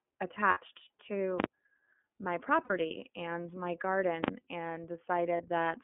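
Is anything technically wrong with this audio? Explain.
Yes. The speech sounds dull, slightly rough and synthetic, with nothing above 3.4 kHz. This is the iLBC codec, which squeezes the signal into a 200 Hz to 3.4 kHz narrowband line, consistent with its 13.33 kbps mode.

From 0.51 to 0.58 s and from 2.64 to 2.71 s, about 60 ms each time, and from 5.37 to 5.43 s, about 30 ms, the sound turns into a brief held, buzzy vowel. These are lost iLBC frames: the decoder fills each gap by repeating the last pitch cycle mixed with noise, then recovers almost immediately.

At 1.40 to 1.44 s and 4.24 to 4.28 s there are sharp, very loud bangs. Invalid numbers at full scale pin the output to one extreme value, far from zero, for each 40 ms block.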